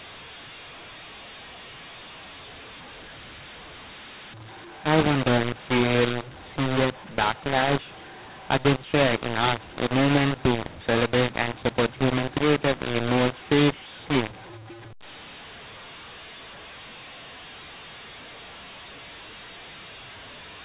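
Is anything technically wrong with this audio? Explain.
Yes. Throughout the speech there is a mu-law and A-law mix-up: the G.711 telephone signal was encoded with A-law but decoded as mu-law. Because the two laws map the 8-bit codes to different levels, amplitudes come out scrambled. Some peaks are exaggerated and others are shrunk, which makes the speech harsh and gritty. The quietest codes decode well above silence, so pauses fill with hiss. On a waveform, the gaps between phrases show a raised, fuzzy floor instead of a flat line. A spectrogram shows broadband smearing between syllables, still capped below 4 kHz.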